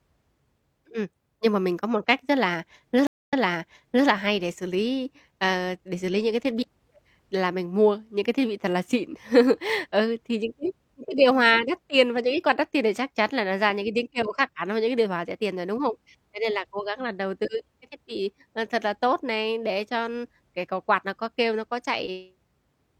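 At 3.07 s a stream reconnect drops the speech into about 0.22 s of silence, shown as a blank gap in the waveform. It then resumes 0.79 s earlier, repeating material, with the first frame fading in, and the fault ends at 4.07 s.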